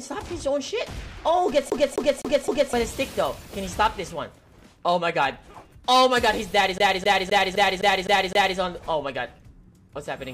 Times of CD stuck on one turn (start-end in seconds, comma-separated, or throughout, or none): 1.70-2.73, 6.78-8.59